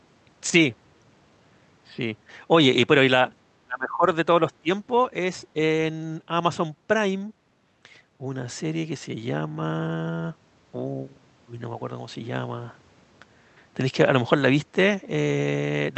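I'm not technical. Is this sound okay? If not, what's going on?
No. From 3.61 to 4.06 s, and again from 4.49 to 4.69 s, the speech drops sharply in volume, almost vanishing at first. This is speech suppressed in double talk, likely from the echo canceller muting this side while both people spoke. Network dropouts would sound choppier.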